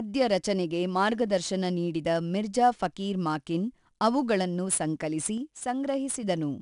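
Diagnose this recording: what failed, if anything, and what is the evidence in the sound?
The codec stage applied 4-bit ADPCM compression throughout. A gritty hiss rides every loud syllable, and nothing is heard above 10.6 kHz, which fits a sample rate near 22 kHz.

A sudden gain jump, likely from a processing-stage level change applied without a ramp: after "ಫಕೀರ್ ಮಾಕಿನ್ ಅವುಗಳನ್ನು ಸಂಕಲಿಸಿ", speech and background drop together by about 4 dB from 5.38 to 6.23 s.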